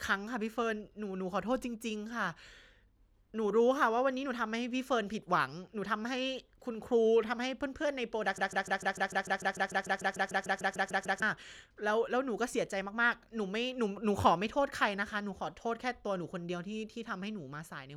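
A speech clip in which, from 8.38 s to 11.22 s, the sound locks into a stutter: one fragment about 0.15 s long repeats exactly, back to back, 19 times before normal playback resumes. This is a broken-record loop, likely caused by the player, encoder or stream stalling and resending the last fragment it held. Whatever should have been heard in those nearly three seconds is missing from the audio.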